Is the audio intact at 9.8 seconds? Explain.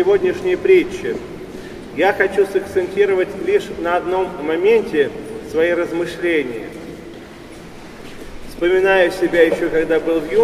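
Yes, at 9.8 seconds the audio is intact, with no dropout, click, distortion or other fault at that moment.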